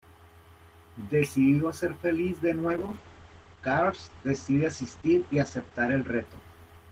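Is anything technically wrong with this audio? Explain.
Yes. A call bitrate drop starts at 2.69 s and lasts to the end. The encoder's rate falls from 32 to 11 kbps, staying lowest for about 2.85 s. Coarser coding roughens the speech. Bandwidth shrinks from 20 kHz to 8 kHz, muffling it.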